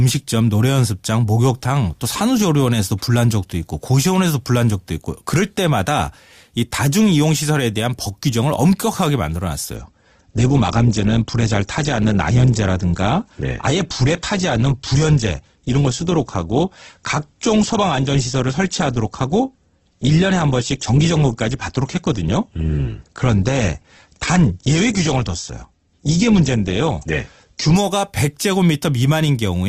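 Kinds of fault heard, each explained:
Adaptive stream at a lower bitrate: the player switched down mid-stream, so from 9.76 to 27.76 s the speech abruptly loses its treble, with nothing above about 8.2 kHz, and sounds thinner and more processed, fitting a drop from roughly 64 to 12 kbit/s Opus, without any gap.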